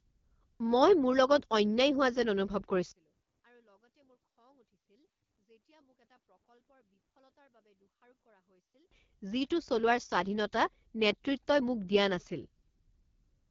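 From the very start, the whole clip has been through the AMR wideband (HD Voice) codec, and it's pushed hard. The speech has that rough, raspy, slightly buzzy grain you get at the low end of AMR-WB, which fits a rate around 8.85 kbit/s rather than the cleaner 12.65 and up. The codec models the voice up to 6.4 kHz and pads the top band with shaped noise, and there's nothing at all above 7.3 kHz, while the low rate makes it sound rough and gritty.

Then from 2.91 to 8.91 s the speech almost disappears, dropping by about 37 dB. What's left is a faint ghost. That's what you'd hear when two nearly identical channels cancel, so the likely cause is one channel inverted, with the mono fold-down subtracting one side from the other. Everything centred, including the voice and its low end, nulls out, and only the tiny differences between channels survive until the level snaps back.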